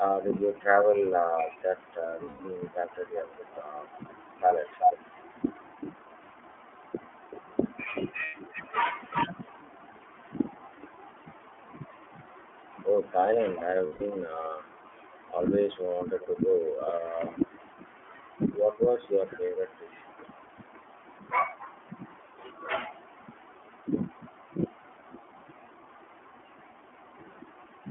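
The whole clip carries iLBC codec damage. The speech sits in a narrow telephone band, about 250 Hz to 3.4 kHz, and sounds rough and slightly synthetic. Each frame's excitation is coded on its own, which fits iLBC's 13.33 kbps mode with 30 ms frames.

Lost iLBC frames then cause three gaps: 2.25 to 2.41 s, 8.25 to 8.35 s, and 13.86 to 14.02 s. The longer gaps last 150 ms and the short one 90 ms. The decoder fills each by repeating the last pitch cycle with noise, so a held, buzzy vowel is heard. Clean speech returns almost at once.

From 15.81 to 22.38 s, a faint copy of the speech trails it by 389 ms. It returns, very faint, from 23.01 to 27.14 s. This is echo leak. The likely cause is a loudspeaker on the far side whose echo canceller let part of the signal back.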